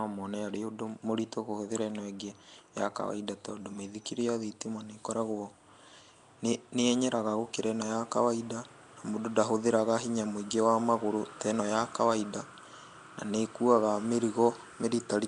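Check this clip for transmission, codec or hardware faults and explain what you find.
The speech carries one fault that runs the whole clip: Nellymoser compression damage that is plainly audible. Nothing is present above about 10.7 kHz, and the voice sits inside a rough, hissy halo with a smeared, underwater quality. The likely cause is the Flash-era Nellymoser Asao codec at a rate that fits around 44 kbps. It codes short fixed blocks with very few bits per sample, leaving weaker bands empty and filling them with noise, which produces both the hiss and the smearing.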